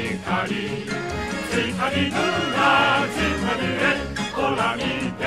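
At 3.91 s, compressed frames are skipped: a couple of 26.1 ms frames never play, jumping about 50 ms ahead; the spectrogram shows a brief vertical line at the join.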